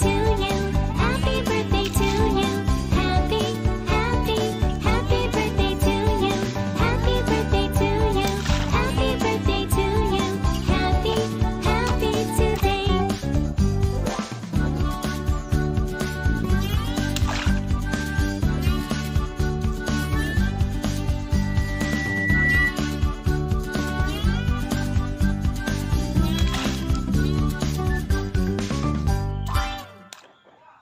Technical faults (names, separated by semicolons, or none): loudspeaker feedback squeal